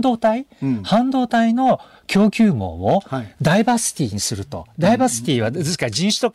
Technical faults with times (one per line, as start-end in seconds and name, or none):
0.06-0.30 hard clipping
0.93-1.72 hard clipping
2.16-2.47 hard clipping
2.88-2.96 hard clipping
3.46-3.73 hard clipping
4.84-5.46 hard clipping
5.83-6.25 hard clipping